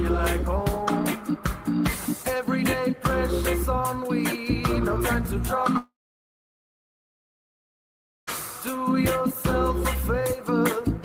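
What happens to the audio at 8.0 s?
At 8.0 s the audio is still inside a long network dropout that runs from 5.77 s to 8.29 s. Roughly 2.5 s of audio never reaches playback; this is likely caused by packets lost or held up on the network. The receiver briefly extends the last sound as a fading buzz or hiss, then leaves about 2.35 s of silence, so 8.0 s falls in that silent gap. The sound resumes at 8.29 s, with the missing stretch skipped.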